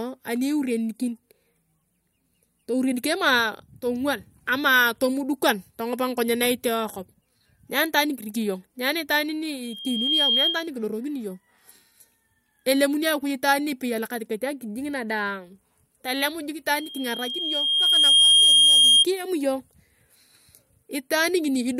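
Loudspeaker feedback squeal at 9.63–10.70 s and 16.74–19.06 s: a 3.2 kHz tone swells, showing as a bright horizontal spectrogram line, rising above the speech.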